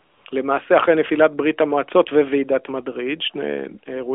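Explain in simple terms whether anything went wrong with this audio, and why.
At 0 to 0.26 s and again at 0.30 to 0.32 s there's AMR comfort noise: the phone sent no speech, so the receiver filled in smooth, fake background hiss.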